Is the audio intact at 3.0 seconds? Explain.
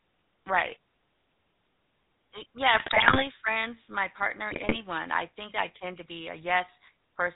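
No. From 2.74 to 3.28 s, just before "friends my partner", GSM bit errors corrupt the stream. Flipped bits reach the decoder and scramble the filter, pitch and gain values for whole frames. The spectrum bends and the level jumps, so the speech breaks into squawks, pops and gargling.

Underneath sits the GSM full-rate codec, audible throughout. It models the vocal tract and drives it with sparse, regular pulses. Nothing above 4 kHz survives. The speech has a buzzy, gravelly roughness, consistent with the 13 kbps full-rate coder.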